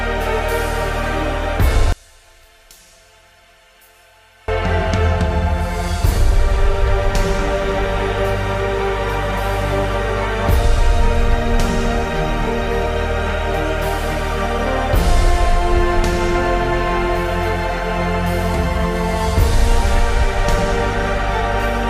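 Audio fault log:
1.92 to 4.48 s, one channel inverted: for about two and a half seconds the sound collapses to a faint trace, roughly 32 dB quieter than the surrounding audio. The centred content nearly vanishes. This is likely one stereo channel flipping polarity. When the two channels are summed to mono, everything they share cancels. Only the small difference between them survives, so the result is a faint copy. Full level returns at 4.48 s.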